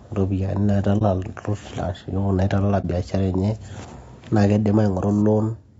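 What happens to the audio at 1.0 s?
From 0.98 to 1.03 s there is an AAC frame loss with muting. One compressed frame's spectrum was zeroed, and overlapping windows fade the sound out and in, leaving a brief dip. The speech there is rough and grainy, with plainly audible damage, likely from low-delay AAC compression at 32 kbps.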